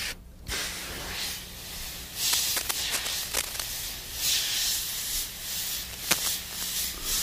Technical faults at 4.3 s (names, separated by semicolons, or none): lost LE Audio frames